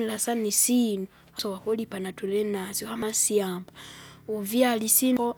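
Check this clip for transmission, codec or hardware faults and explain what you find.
The speech clip has damaged data in a compressed stream at three points: 1.39 to 1.42 s, between "sana isinu" and "wakulipa natulinasyo", then 3.02 s and 5.17 s. At each point, corrupted bytes in the stream make the decoder misread or reject the affected frames and lose sync until it finds the next valid frame header. The result is a brief chirp or blip. The first is the longest, at about 30 ms, and the other two are momentary.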